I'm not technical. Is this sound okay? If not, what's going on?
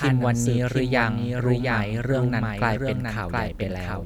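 No. A doubled audio track runs throughout: a quieter copy of the speech follows about 0.7 seconds behind, likely from the sound being captured twice.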